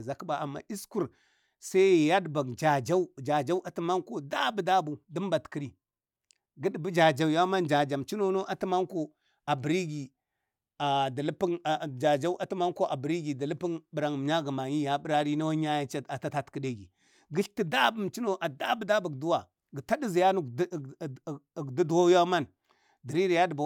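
Nothing stood out as a technical fault on listening to this speech recording.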